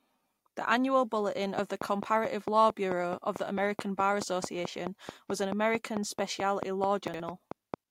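From 1.59 to 7.75 s a train of clicks ticks regularly at 4.55 per second, around thirty sharp pops peaking about 15 dB above the speech, likely from equipment interference, showing as evenly spaced thin vertical lines. At 7.08 to 7.2 s, chunks out of order: a 60 ms segment plays one chunk late, producing a jumbled flicker with hard, stepped waveform joins.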